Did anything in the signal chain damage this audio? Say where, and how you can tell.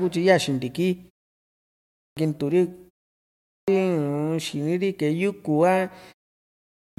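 Yes, at playback: a clipped start after a pause, three times. Speech resumes abruptly at 1.59 s, 3.12 s and 6.36 s, each after a short gap of about 0.3 to 0.6 s, and roughly 0.56 to 0.61 s of the onset is simply gone (through 2.17, 3.68 and 6.98 s). That points to the output device idling in silence and taking about half a second to wake or relock, swallowing the start of each phrase.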